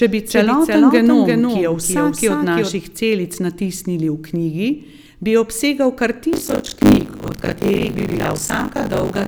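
Speech recording with two faults. From the start until 2.76 s, just before "celic natisnili", a doubled audio track is heard: a full-band copy about 5 dB quieter trails by about 300 ms, likely from a second, slower capture path. On a waveform this appears as a displaced echo of every syllable onset. From 6.32 s, right after "knjigi bi obsegal kar", to the end, buffer tearing produces a 50 Hz robotic buzz. Roughly half of each buffer repeats audio about 40 ms old, which shows as regular vertical seams in the spectrogram.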